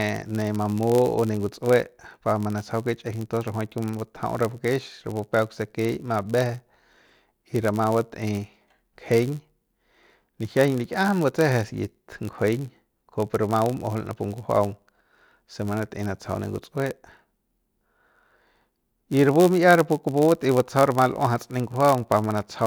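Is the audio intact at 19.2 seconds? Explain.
No. At 19.2 seconds the speech carries a block size mismatch (padded), present throughout the clip. Each block arrives short and is topped up with zeros. The tiny gaps make a 91.5 Hz buzz, and the speech runs slightly slow (0.996×) with its timbre kept.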